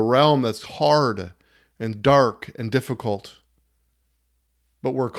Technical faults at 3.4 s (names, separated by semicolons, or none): clock drift between sender and receiver; repeated timing corrections